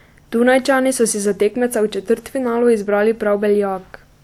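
No faults can be heard anywhere in the recording, from the first syllable to the last.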